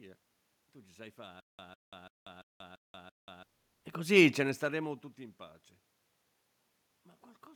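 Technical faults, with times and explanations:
1.40 to 3.43 s, stutter with silent gaps: right after "ci sai" the playback catches on a fragment about 0.15 s long and plays it 6 times, each followed by roughly 0.19 s of dead digital silence, so it ticks over at an even 0.34 s pace. That rhythm points to a stalled player or stream, likely retrying, replaying its last chunk and then running dry each time. Whatever should have sounded in those two seconds is simply gone.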